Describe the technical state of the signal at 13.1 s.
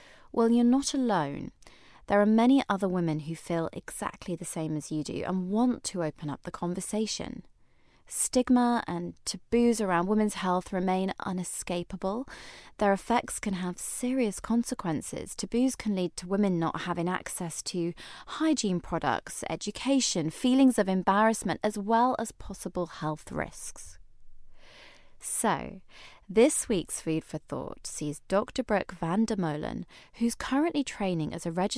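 At 13.1 s the speech signal is intact, with no technical fault present at that moment.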